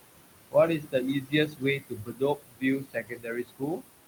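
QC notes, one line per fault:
Throughout, noise suppressor artifacts: the background pumps down between phrases and swells back under speech. The suppressor pulls noise down by about 20 dB, and the room noise sits about 11 dB below speech.
0.80–0.94 s and 1.21–3.90 s, speech cut by the noise suppressor: soft consonants and word tails sound swallowed or faint. The suppressor mistakes low-level speech for noise and drops it by up to about 18 dB in the first span (roughly a tenth of a second) and up to about 22 dB in the second (around two seconds in total).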